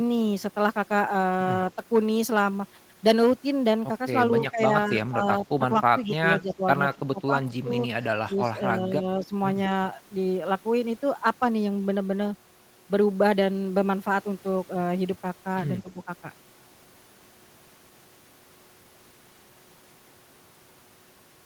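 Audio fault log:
4.12–6.64 s, 6.95–7.7 s, 8.02–9.32 s, 15.83–16.07 s: speech suppressed in double talk. The speech dips and breaks up in pieces. Most drops reach about 10 dB. The one at 6.95–7.7 s reaches about 20 dB. An echo canceller likely treated overlapping talk as echo and turned it down.
6.04–6.55 s: echo leak. A faint copy of the speech trails it by 208 ms. It sits roughly 20 dB below the direct sound. Loudspeaker sound likely reached a microphone, and the echo canceller did not remove all of it before sending it back.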